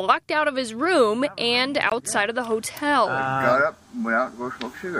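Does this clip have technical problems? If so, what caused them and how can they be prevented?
Yes. A brief gap of about 20 ms between 1.90 and 1.92 s, after which the sound resumes as if it had kept playing. This is likely a Bluetooth dropout, consistent with a single packet arriving too late. Keeping the headphones close to the source and away from Wi-Fi congestion prevents it.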